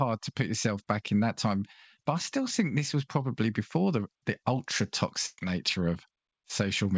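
At 5.26 to 5.40 s, a burst of packet loss. About 120 ms of speech is missing. The receiver stretches the last sound and fades it down, then speech resumes further on.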